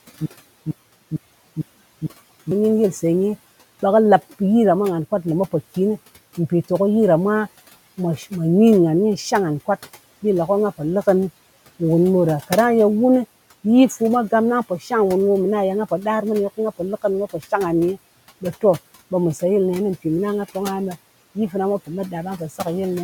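From the start to 2.51 s, a 256 ms burst of speech repeats five times with about 196 ms of silence between: a stutter with silent gaps, likely from a stalled stream.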